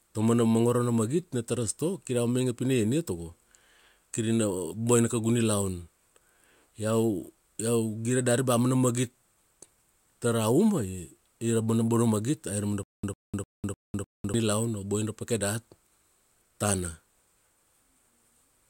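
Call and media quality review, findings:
Stutter with silent gaps, 12.83–14.34 s: a 100 ms burst repeats five times, each followed by about 200 ms of dead silence, one cycle every 302 ms. Likely a stalled stream replaying its last fragment on each retry, with the missing speech lost.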